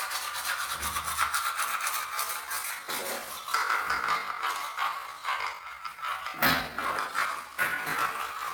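From 1.93 s to the end, software likely slowed the audio to about two-thirds speed, a time-stretched section, so the pace drops abruptly while pitch holds and the sound drags.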